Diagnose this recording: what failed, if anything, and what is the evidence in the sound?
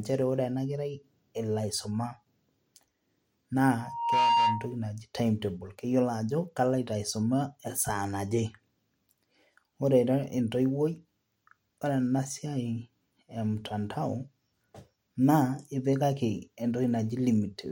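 The failure is on the analogue side, a loudspeaker feedback squeal: from 3.79 to 4.76 s a 934 Hz tone swells up in under half a second, sitting a few dB above the speech, then cuts just before "naji timetable keyiolo ajo". The mic heard its own speaker and that frequency ran away.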